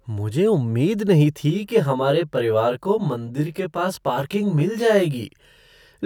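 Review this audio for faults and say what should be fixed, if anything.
From 1.50 s to 5.29 s, just after "मुझे उम्मीद नहीं", the speech turns rough and slightly doubled. This is channel delay (comb filtering): one channel lags the other by around 20 ms, and summing them to mono cuts evenly spaced notches starting near 30 Hz. Keep the channels time-aligned and check the mono fold-down before export.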